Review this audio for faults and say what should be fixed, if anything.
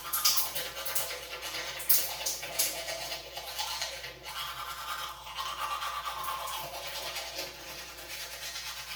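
Channel delay (comb filtering) runs through the whole clip. The sound is hollow and phasey from start to finish. One channel arrives around 5 ms after the other. When the two are folded to mono, shared content cancels at evenly spaced frequencies. The first notch sits near 100 Hz, with further notches stepping upward at regular intervals. To prevent it, time-align both channels before any mono summing.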